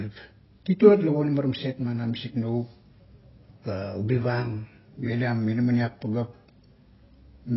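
From start to finish the speech sounds dull and muffled, with nothing above about 5.6 kHz, so consonants lose their crispness and sibilants turn smeared and fizzy, with a watery warble on held sounds. The likely cause is heavy AAC compression: the AAC-LC encoder, starved of bits in a way that fits a rate near 16 kbps, lowered its cut-off and quantised the remaining frequency bands coarsely, leaving gaps it could not render cleanly.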